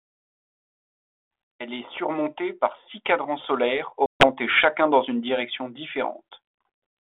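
Speech over a 32 kbit/s G.726 link has packet loss on an ADPCM call from 4.06 to 4.28 s. About 140 ms drops to hard-edged silence, which fits roughly seven lost packets. The decoder's predictor and step size then fall out of step with the sender, so the sound resumes slightly distorted before settling.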